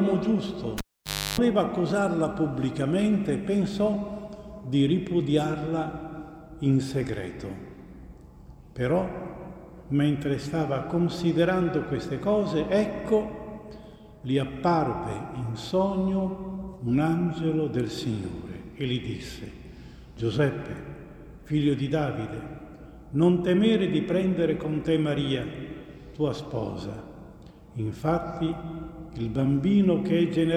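At 0.78 s the audio shows a cable pulled and plugged in: a pop, about 570 ms of near silence, including roughly 316 ms of 50 Hz mains buzz as the plug tip makes partial contact, and a second pop at 1.40 s when full contact restores the sound.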